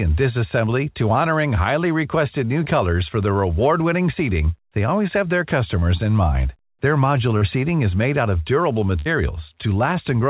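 This is a speech recording carried over a call link, with nothing above 4 kHz, which fits narrowband G.711-style coding. It has three instances of short concealed packet loss, at 2.64, 5.80 and 7.37 s. In each, a small stretch of audio arrived too late to be decoded: about 20 ms at the first two and about 40 ms at the third. The receiver covered each hole by extending the sound just before it, then blended back into the real signal. The result is a brief smear or wobble, longest at 7.37 s. A short consonant could drop out there. At 8.99 s there is a burst of packet loss lasting until 9.07 s. About 60 ms went missing in a row. The receiver kept the last sound going for about 62 ms and faded it. It then picked up further along, so a short piece of the speech is gone.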